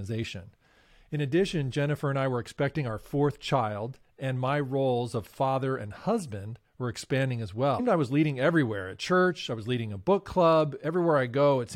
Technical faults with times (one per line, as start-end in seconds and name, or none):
7.78 damaged data in a compressed stream